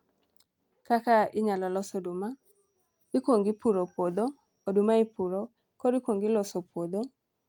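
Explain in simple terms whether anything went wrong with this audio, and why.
Nothing went wrong here: the speech recording shows no technical faults at any point.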